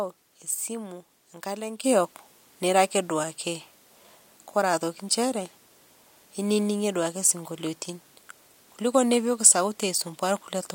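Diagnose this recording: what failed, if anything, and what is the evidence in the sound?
At 1.84 s the whole recording steps up by about 8 dB from one sample to the next and stays there right through to the end. The speech and the background noise rise together, so the source didn't just get louder. That's a sudden gain jump, likely a digital gain setting or bit shift applied in the processing chain without a ramp. The level changed instantly instead of being faded in over a few milliseconds.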